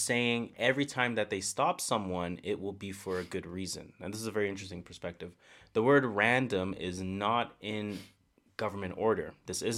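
There are no technical faults to describe in this recording of speech.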